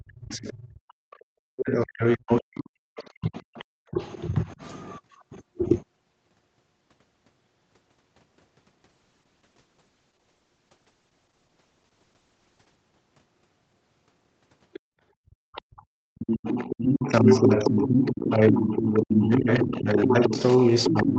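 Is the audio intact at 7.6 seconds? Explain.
Yes, the audio is intact at 7.6 seconds, with only the normal band limit of a call path, nothing above about 8 kHz, and no fault at that moment.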